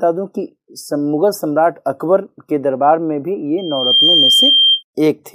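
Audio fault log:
3.58–4.83 s, loudspeaker feedback squeal: a single 3.2 kHz tone swells over roughly 0.4 s to about 5 dB above the sound, because the microphone re-captures its own loudspeaker and the loop gain at that frequency passes one. A spectrogram shows one bright horizontal line, the waveform a growing envelope.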